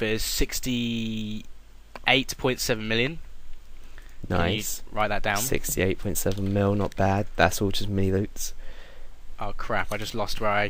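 No audible technical faults are present in the audio.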